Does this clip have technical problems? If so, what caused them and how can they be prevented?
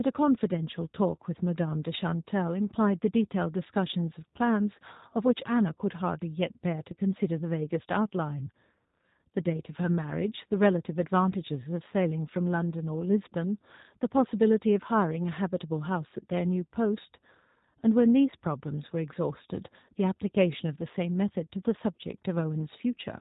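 Yes. G.729 codec damage runs through the whole clip. The speech sounds rough and synthetic, rebuilt frame by frame from a vocal tract model and a handful of pulses, which fits an 8 kbit/s G.729 stream. A spectrogram shows a hard ceiling at 3.8 kHz with nothing above it. To prevent this, carry the call over a wideband codec such as Opus or G.722 rather than G.729.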